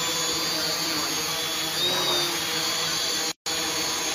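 At 3.32 s a gap at a join of encoded pieces opens, lasting about 146 ms until 3.46 s. Untrimmed encoder start delay and last-frame padding leave silence there. It appears as a flat waveform stretch and a blank vertical spectrogram band with smeared edges.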